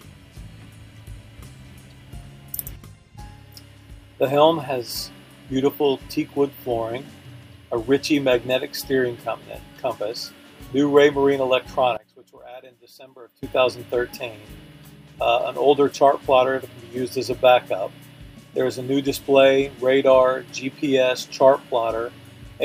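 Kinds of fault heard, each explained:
One channel inverted: likely one stereo channel's polarity was flipped, so shared content cancels in mono; from 11.97 to 13.43 s the sound falls about 21 dB.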